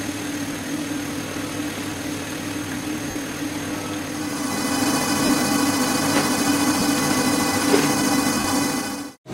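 Lost LE Audio frames cause five brief dropouts, at 0.53 to 0.55 s, 3.10 to 3.16 s, 5.25 to 5.30 s, 6.79 to 6.82 s and 8.40 to 8.45 s, lasting 15 to 52.5 ms, which fits runs of two to seven 7.5 ms frames. The LC3 decoder fills each gap by repeating the last spectrum with randomised phase signs, so tonal content turns into a short noisy smear. The longer gaps also fade in level before the signal resumes.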